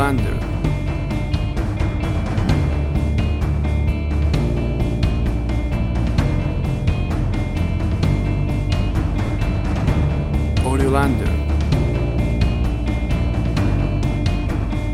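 Lost LE Audio frames cause short dropouts at 0.34 s, 2.45 s and 9.26 s. They last 30, 30 and 20 ms, which fits 10 ms frames. The decoder fills each gap by repeating the last spectrum with scrambled phase. It sounds like a brief noisy smear.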